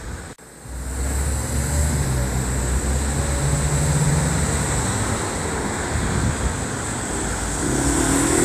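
From start to finish, the audio has likely been through low-bitrate Vorbis compression, with damage that points to a rate somewhere around 36 kbps. The encoder has kept a smooth spectral outline but quantised the treble so coarsely that fine detail turns into hiss of similar energy, and nothing survives above 14.2 kHz. The top end sounds grainy and noisy, tonal parts take on a rough edge, and sharp onsets lose their definition.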